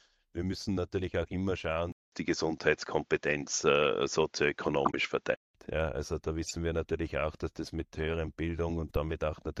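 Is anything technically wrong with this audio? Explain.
Yes. From 1.92 to 5.55 s, just after "müssen natürlich auch immer", the speech turns dull and shifts in level by about 5 dB, with a short gap of about 200 ms at the switch, nothing above 7.6 kHz, and a faint new noise floor. It likely comes from an input switched to a poorer device, which passes a narrower band. Brief glitches at 4.85–4.94 s, at 6.44–6.53 s just before "wir natürlich auch dass", and at 8.87–8.95 s after "dass das mit höheren" are corrupt frames decoded. Damaged bits put energy at the wrong frequencies across a few frames each time. The first burst is loud, the second moderate, and the third very faint.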